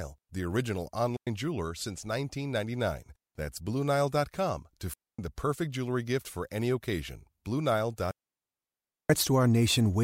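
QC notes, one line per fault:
1.16–1.27 s, 4.94–5.19 s and 8.11–9.10 s: digital wireless dropout. The speech cuts to near silence for about 0.1 s, 0.25 s and nearly a full second, with no noise burst either side. The receiver lost too much data and muted with a very quick fade.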